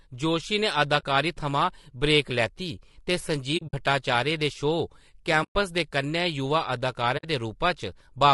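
Throughout the speech there is a rough, grainy texture, with noise filling the gaps between harmonics and a thin, synthetic-sounding top band. This is most likely low-delay AAC compression, AAC-ELD at around 32 kbps. Too few bits are left to code the spectrum finely, and at this rate the damage is plainly audible. On a spectrogram the harmonic stripes look smeared and speckled, and the upper band is patchy.

AAC frame loss with muting occurs four times. From 0.99 to 1.04 s, just after "जोशी ने", there is a 40 ms soft-edged gap. From 3.57 to 3.74 s, after "लैती ते", losses totalling 100 ms are scattered over 160 ms, and the longest silent stretch is about 70 ms. A 120 ms hole follows at 5.43 to 5.56 s, and a 60 ms one at 7.17 to 7.25 s. The decoder zeroed the missing spectra, and the overlapping windows taper the sound out and back in. The waveform shows brief fades to flat silence, and the spectrogram shows clean vertical blank bands.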